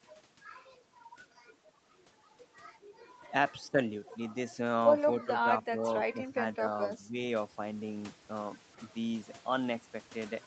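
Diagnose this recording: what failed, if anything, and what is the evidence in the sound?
Speech suppressed in double talk at 6.93 to 7.16 s: the voice briefly dips a few decibels, likely the call-processing echo canceller attenuating near-end speech during overlapping talk.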